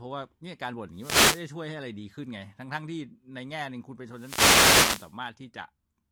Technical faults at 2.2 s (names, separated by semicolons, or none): none